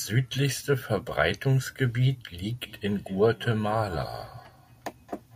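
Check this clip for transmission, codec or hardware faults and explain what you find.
There's one fault, a feedback echo between two devices, running from 2.61 s to the end. A second device in the room plays this speech back into the microphone, and the local echo canceller can't remove it, so it returns roughly a fifth of a second later, about 19 dB below the speech at its loudest.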